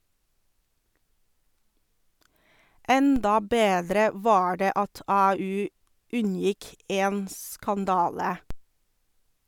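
A speech clip with two DC steps, at 3.16 s, just before "bedre var det", and at 8.51 s. Each is a sudden jump of about -22 dBFS in the zero line, heard as a low thump that then drains away through a roughly 5 Hz high-pass. Unlike a dropout or splice click, the speech carries on unbroken.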